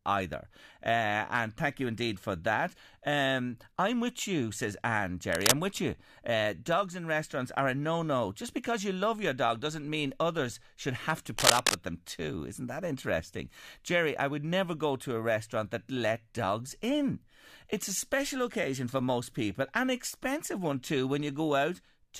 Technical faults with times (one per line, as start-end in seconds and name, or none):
5.32-5.53 cable scratch noise
11.37-11.75 cable scratch noise